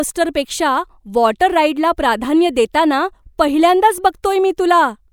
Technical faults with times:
none

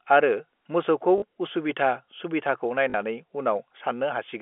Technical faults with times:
1.18-1.22 packet loss with last packet repeated
2.90-2.94 packet loss with last packet repeated

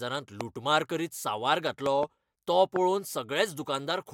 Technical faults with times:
0.41-0.43 loud pop
1.86-2.05 loud pop
2.76-2.78 loud pop

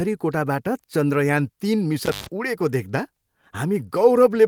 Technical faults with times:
2.05-2.27 intermittent contact

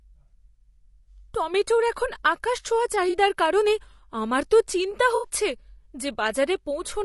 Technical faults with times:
0.00-7.04 low-delay AAC compression
3.09-3.16 AAC frame loss with concealment
5.15-5.29 AAC frame loss with concealment

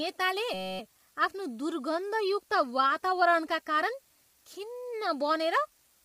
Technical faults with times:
0.00-6.04 low bit depth with dither
0.00-6.04 low-delay AAC compression
0.54-0.79 system hang loop

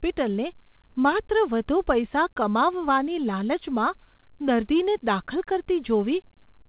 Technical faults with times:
none

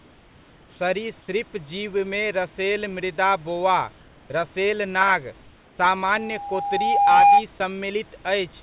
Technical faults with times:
0.00-0.80 comfort noise in place of the background
5.42-5.78 comfort noise in place of the background
7.58 sound dropped by the voice detector

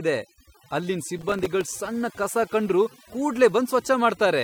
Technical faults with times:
0.00-4.44 overdone noise removal
1.18-1.72 processor overload crackle

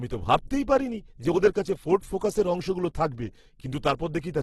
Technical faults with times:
0.00-4.43 Opus compression

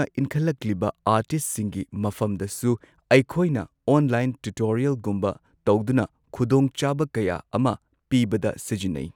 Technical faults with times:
none

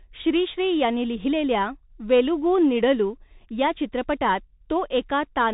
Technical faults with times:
0.00-5.54 Bluetooth CVSD headset codec

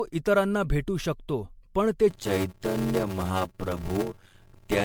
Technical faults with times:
0.00-4.85 generation loss
2.10-4.85 block size mismatch (padded)

